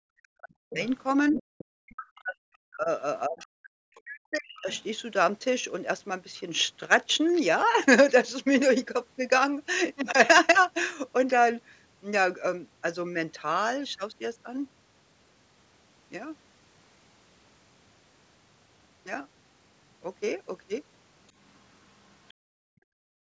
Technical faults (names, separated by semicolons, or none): speech suppressed in double talk; other side's voice leaking through; background gated by the echo canceller